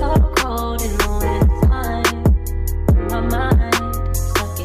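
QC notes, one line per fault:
No faults found in this clip. Nothing heard in the audio calls for a QC note.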